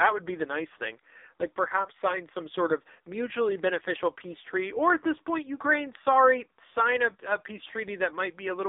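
Buzzy, synthetic-sounding speech, band-limited to roughly 300 Hz to 3.7 kHz with nothing above 3.8 kHz throughout, points to heavy AMR narrowband mobile codec coding, consistent with its low 5.9 kbps mode.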